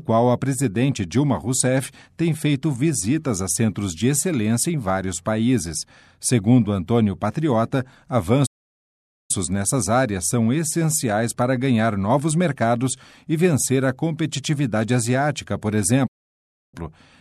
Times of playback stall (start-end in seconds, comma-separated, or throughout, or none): 8.46-9.31, 16.07-16.74